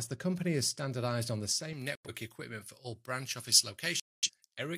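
From 1.73 s onward, pre-emphasis is left on: the treble boost applied before recording or transmission was never undone, so the sound turns thin, bright and hissy. A spectrogram shows the upper band lit up, about 11 dB stronger at 10 kHz relative to 1 kHz, a tilt consistent with a J.17 curve.

Corrupt frames are muted at 1.95 to 2.10 s and again at 4.00 to 4.30 s. Damaged compressed frames were rejected by the decoder and replaced with silence, so the sound drops out abruptly while timing is kept. The waveform shows flat gaps of 0.15 s and 0.30 s, and the spectrogram shows clean vertical blank columns, which fits about two and five lost frames.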